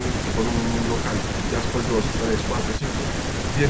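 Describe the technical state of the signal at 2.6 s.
At 2.6 s the speech is intact, with no dropout, glitch or distortion, just the normal call-path band limit that leaves nothing above about 8 kHz.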